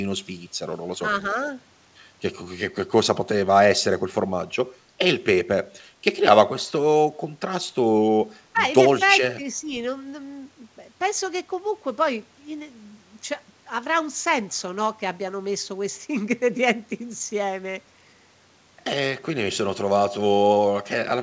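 At 8.44 to 8.61 s the speech drops sharply, by about 20 dB, then dips again by about 10 dB from 9.35 to 9.75 s. This is likely speech suppressed in double talk, with the echo canceller attenuating the near talker while the far side speaks.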